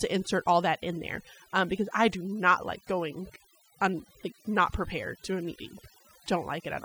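Overdone noise removal runs through the whole speech clip. A noise reducer set far too aggressively keeps switching individual frequency bands down or off wherever they sit near its noise estimate, so the background drops and breaks up into twinkling specks, and quieter parts of the voice are stripped away.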